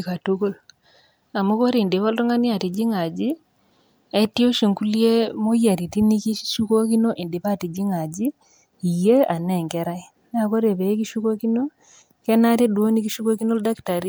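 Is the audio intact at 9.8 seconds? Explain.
Yes, at 9.8 seconds the speech plays through cleanly with no audible dropout, click or other fault.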